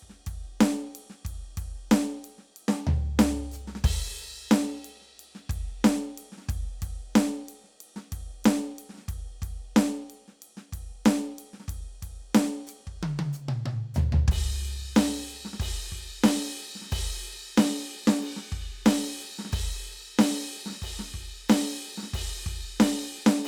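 A repeated buffer at 5.16 to 5.18 s: late-arriving music made the device replay its last 20 ms block once, giving a brief stutter with a hard join.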